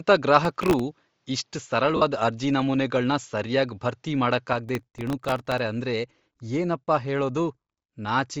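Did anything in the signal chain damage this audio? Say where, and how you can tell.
Yes. From 0.0 to 4.53 s the speech sounds duller and boxy, with nothing above 7.4 kHz, a level about 5 dB different from the rest, and a faint new noise floor roughly 50 dB below the speech. At 4.53 s it opens up again with no gap. This is likely an input switched to a poorer device at the driver stage, a narrower-band microphone or headset path swapped in, then back out.

At 0.45 to 0.80 s and again at 4.69 to 5.59 s, a gritty tearing crackle rides on the speech, the second burst longer and denser. Each tick is a tiny hard-edged repeat of old audio. The pattern fits buffers well under a millisecond long, with a dozen or so missed in the first burst and dozens in the second. This is processor overload crackle at the driver or buffer stage: callbacks missed their deadlines back to back.

From 1.96 to 2.02 s, about 52.5 ms, the speech turns into a brief noisy, smeared wash instead of clean sound. 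The length fits seven consecutive 7.5 ms frames. These are lost LE Audio frames on the wireless link. The LC3 decoder concealed the gap by reusing the last spectrum with scrambled signs, which blurs any tonal detail into noise.

Throughout all 8 seconds, the upper spectrum has a plainly audible breathy, grainy edge, with noise-like fill where detail should be. At the codec stage this likely comes from Bluetooth LC3 compression at around 32 kbps with 7.5 ms frames. At that rate the encoder zeroes much of the high band and substitutes shaped noise.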